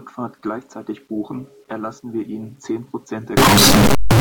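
From 3.37 s to the end, the speech suddenly turns into loud, harsh distortion, with quiet bits blasting as hard as everything else. That's likely a signed and unsigned mix-up on the 8-bit samples: the top bit gets flipped, so every zero crossing leaps across the full range.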